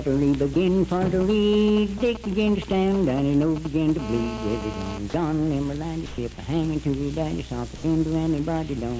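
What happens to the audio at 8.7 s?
Nothing goes wrong at 8.7 s: the sound carries on intact, with only the steady top-end limit around 8 kHz that the G.722 call path leaves throughout.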